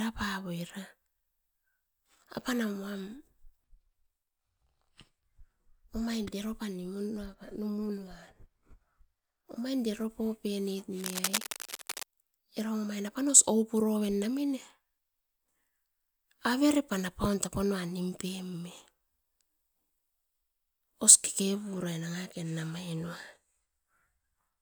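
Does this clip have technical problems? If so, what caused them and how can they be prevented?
Yes. Cable scratch noise, 10.99 to 12.04 s: dense crackling nearly as loud as the speech, likely from a worn connector moving and its contact resistance fluctuating. Replacing worn leads and securing cables so they cannot move during recording prevents it.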